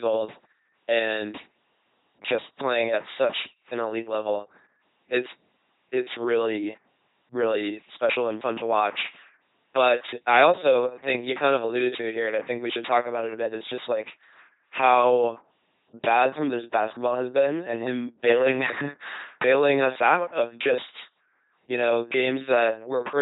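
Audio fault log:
Throughout: LPC-10 vocoder, heavy. The speech becomes a mechanical buzz or hiss because each instant is treated as fully voiced or unvoiced, with nothing above 3.9 kHz, consistent with 2.4 kbit/s.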